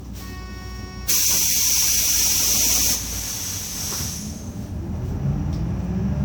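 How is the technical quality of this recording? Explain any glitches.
Generation loss colours the whole recording, from start to finish. The sound is swirly, smeared and hollow, with attacks blurred, more than a single pass at a moderate bitrate would explain. It is likely the result of about seven rounds of lossy decoding and re-encoding, which fits an MP3 chain at around 128 kbit/s. Each round requantised on a shifted frame grid, so noise and missing bands compounded. A spectrogram would show patchy, flickering holes and a ragged top end, and transients would look softened on the waveform.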